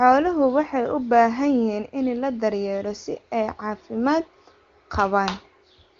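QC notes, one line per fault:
Nothing stood out on listening, and the HD Voice (AMR wideband) coding sounds like it runs at a high rate with at most faint traces of its processing.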